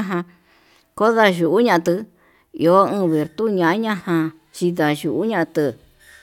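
No technical faults can be heard anywhere in this speech recording. There is no moment in it that needs a timestamp or an explanation.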